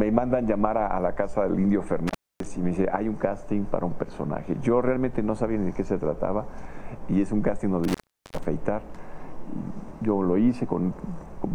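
At 2.07 s the sound drops out, and it returns at 2.46 s. The line is open for about 260 ms. At 7.84 s it happens again, lasting until 8.45 s, with about 400 ms open. This is intermittent contact. A loose cable or plug briefly breaks the signal path. Each break starts and ends with crackle as the contact scrapes. While the line is open, a faint hiss remains.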